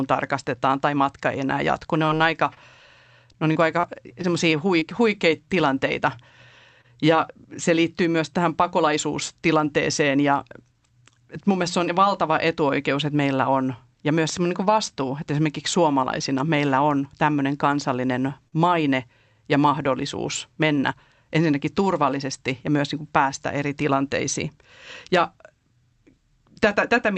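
Packets arriving late or not at all over a call link break up this speech recording at several points, and the bandwidth topping out around 8 kHz fits an Opus codec running near 48 kbps. From 2.05 to 5.49 s there are scattered short gaps: roughly ten packets went missing, each patched by extending the preceding sound, so brief ticks and smears appear, the longest about 30 ms. At 6.81 to 6.86 s a short concealed packet loss swaps 20 ms of lost audio for 27 ms of synthesised continuation, heard as a quick smear. A jitter buffer speed-up trims pitch periods to shed accumulated delay from 8.78 to 9.60 s, running about 4% fast and removing roughly 40 ms, so the speech runs faster at unchanged pitch. A second speed-up from 20.60 to 22.23 s runs about 2% fast and removes around 50 ms. Between 14.29 and 14.39 s a loud pop occurs as two sharp clicks about 5 dB above the speech, likely from a switch, plug, static discharge or driver glitch. 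At 18.48 s a short stall from a late packet leaves the jitter buffer empty, holding the current sound for 42 ms before resuming with nothing lost.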